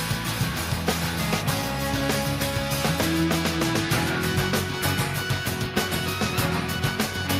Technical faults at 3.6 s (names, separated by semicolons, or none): none